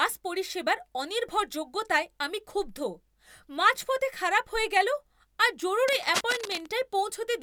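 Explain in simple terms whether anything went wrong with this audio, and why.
Cable scratch noise runs from about 5.88 to 6.67 seconds, close to the end of this speech clip. For just under a second, a rough scratching, rustling sound sits over the speech, loud enough to notice but still quieter than the speech itself. The likely cause is a worn cable or plug being moved. Its electrical contact flickers between good and poor, and each flicker adds an irregular burst of crackle to the recording.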